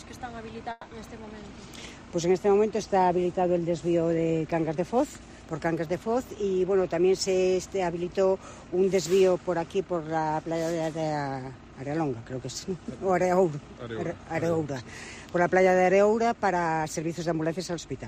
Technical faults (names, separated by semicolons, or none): long network dropout